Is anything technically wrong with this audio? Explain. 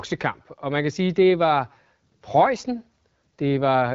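No, nothing is technically wrong with this speech recording. It carries the character of the AMR wideband (HD Voice) codec at 12.65 kbit/s, with the top of the band ending at about 7.3 kHz and only light coding texture audible.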